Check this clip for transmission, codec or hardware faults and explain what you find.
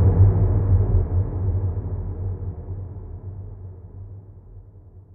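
Nothing wrong can be heard in this recording.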